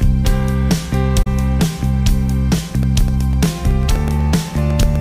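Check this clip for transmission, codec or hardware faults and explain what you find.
Two faults are audible, one a single soft gap and the other a regular pattern of ticks.

From 1.22 to 1.27 s there is AAC frame loss with muting. About 43 ms of audio is missing, which fits two lost frames. The decoder zeroed the missing spectrum, and the overlapping transform windows taper the sound down into the gap and back up after it. The result is a smooth-edged hole. That soft, single dropout separates it from a hard cut or a transient glitch.

From 2.58 to 4.96 s come periodic USB or driver dropouts, one every 0.125 s, around twenty in all. Each time, something stalls the bus or audio driver and roughly a millisecond of audio is replaced by silence. Because the cut is abrupt and very short, each one is heard as a small tick rather than a gap. The even spacing and sharp edges set these apart from the earlier frame loss, which is longer, isolated and faded.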